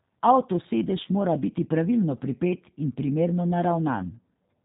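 Speech squeezed through the G.729 codec at 8 kbit/s, with plainly audible damage: nothing survives above 4 kHz, and the voice comes out thin, a bit rough and synthetic, since it's rebuilt from a filter, a pitch predictor and a handful of pulses per frame. Around 1.03 to 1.08 s there's VoIP packet loss concealed by the speech codec. About 20 ms goes missing, which fits a single lost packet. The decoder papers over it by stretching the previous sound into a buzzy tone or coloured noise that fades, and the voice stays weak or distorted for tens of milliseconds or more after.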